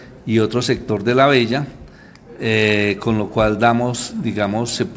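Nothing here stands out as a problem: the audio simply has the usual call-path character, with nothing above about 8 kHz, which fits a wideband call codec like G.722.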